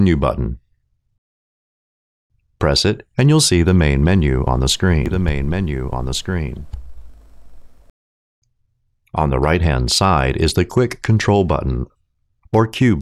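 From about 5.06 s to 7.90 s there's a doubled audio track. A second, full-band copy of the sound runs roughly a second and a half behind the original and a few dB quieter, around 5 dB down. It's dry, with no decay or room colour, and it cuts in and out abruptly at those edges. The likely cause is the signal being picked up again through a slower path and mixed back in.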